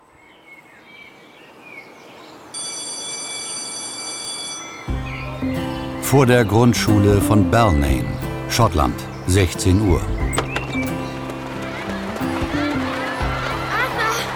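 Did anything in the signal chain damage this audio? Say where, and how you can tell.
Yes. At the driver or buffer stage, a dropped buffer (overrun) likely occurred, with samples overwritten before being read. Skips forward with no silence occur at 1.1, 4.25, 8.93 and 13.43 s, each losing roughly 10 ms, the last nearer 30 ms.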